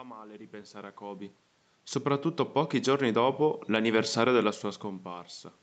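From 2.03 s to 4.17 s the automatic gain control misjudges the input as too quiet and steadily raises its gain, by about 4 dB in total. Because the boost acts on the whole signal, the speech and the room noise behind it swell together over those two seconds, which distinguishes it from the level shifts near 1 and 4.5 s, where the talker moves relative to the microphone and only the voice changes.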